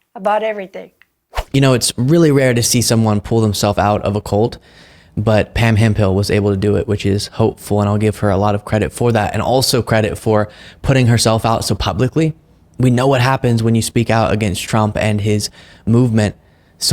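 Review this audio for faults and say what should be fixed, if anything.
No faults turn up in this audio, so nothing needs to be fixed.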